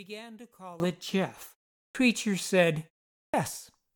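A short speech clip with two distinct faults. From 0.0 to 0.8 s the level drops by about 22 dB and the sound turns faint. The likely cause is one channel inverted: with one stereo side's polarity reversed, the shared centre content cancels when the channels are summed to mono. On a spectrogram that opening stretch shows faint energy. On a waveform it is a much smaller trace that jumps to full size at 0.8 s. The second fault is clipped start after a pause, which happens twice. After a 0.34 s gap the sound resumes at 1.81 s with its first 0.14 s missing. After a 0.4 s gap it resumes at 3.22 s with 0.12 s lost. In both cases the output device has gone idle during the silence and only wakes after the next sound has already begun, so the onset arrives abruptly. The waveform shows the envelope springing from flat silence straight to full amplitude with no rise. On the spectrogram the column starts with a hard vertical edge, and the onset energy that should lead into it is missing.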